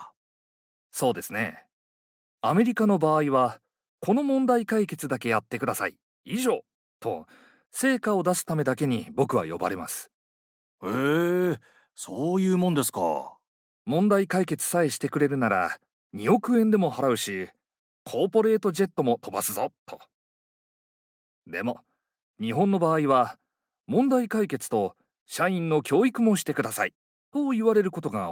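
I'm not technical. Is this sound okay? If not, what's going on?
Yes, I can't hear any technical faults in this recording.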